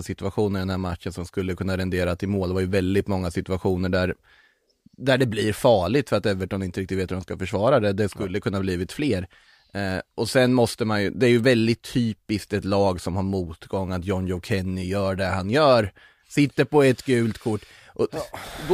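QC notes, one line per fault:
No faults were found in the speech. Nothing in the clip calls for a QC entry.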